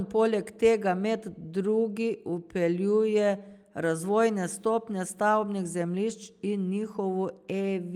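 No technical faults can be heard anywhere in the speech.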